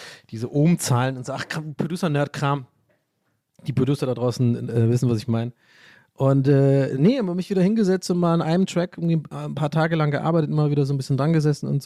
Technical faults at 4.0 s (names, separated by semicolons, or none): none